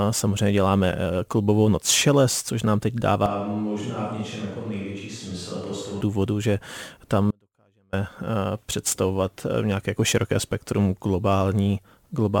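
From 3.26 to 6.01 s the speech turns roomy and hollow, drops roughly 10 dB and loses bass, a switch to a distant microphone, likely after the close mic failed. The waveform shrinks abruptly, and the spectrogram thins at the bottom while a raised noise floor fills the pauses.

At 7.31 s the speech cuts out mid-flow for 0.62 s, returning abruptly at 7.93 s. This audio dropout to a faint residue likely comes from the signal being lost while the path stayed live. The waveform collapses to a thin trace, and the spectrogram shows a sharp-edged, nearly empty band.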